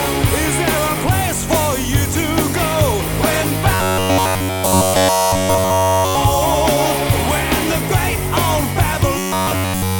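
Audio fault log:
3.74–6.15 s and 9.18 s to the end: robotic sound from repeated short buffers, a steady metallic 93.8 Hz buzz replacing all the sound rather than gaps or clicks, likely from short 11 ms chunks repeating.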